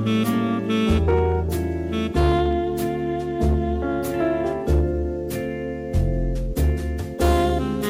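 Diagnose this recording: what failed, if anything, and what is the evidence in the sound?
A gain stage drove the signal past full scale, so hard clipping runs through the whole recording: the level sits about 6 dB too hot for the converter or sample-format stage that followed, and the waveform peaks are sheared flat. Only a small share of the audio, around one or two percent, crosses the ceiling, so the damage is confined to peaks: each loud moment carries a brittle crackle, with added high harmonics from the squared-off tops.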